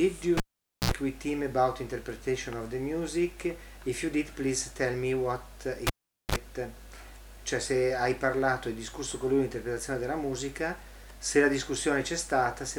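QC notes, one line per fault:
0.37–0.91 s and 5.87–6.36 s, cable pulled and plugged in: pop, about half a second of near silence, then brief hum (60 Hz the first time, 50 Hz the second) and a second pop. The pops and hum are what separate it from a plain dropout.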